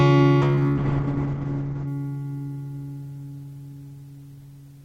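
From about 0.42 s to 1.93 s there's a call bitrate drop. The encoder gets starved, with the sound pointing to a fall from roughly 32 to 8 kbps, so everything above 8 kHz gets cut and the audio turns muffled and watery until it recovers.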